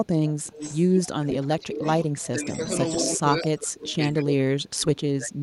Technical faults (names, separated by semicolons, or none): echo leak; speech suppressed in double talk